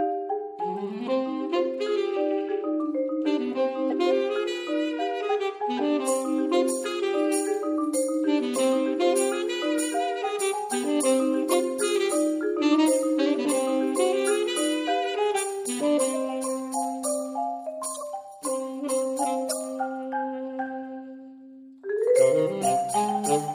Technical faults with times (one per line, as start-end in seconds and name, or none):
3.90-3.92 corrupt frame decoded
11.50-11.54 corrupt frame decoded
17.94-18.05 corrupt frame decoded
19.48-19.51 corrupt frame decoded
22.64 corrupt frame decoded